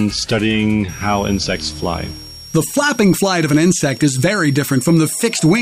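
A switching supply whistle starts at 0.89 s and runs to the end: a supply in audible burst mode whines thinly, drifting between 5.5 and 5.7 kHz, roughly 20 dB below the sound.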